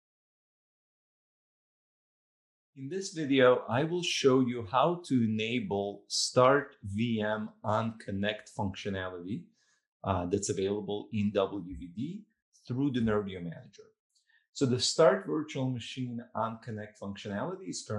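Throughout, the sound is dull and gurgling with a granular edge, likely from MP2 compression at a low bitrate, around 80 kbps, switching off and coarsely quantising sub-bands.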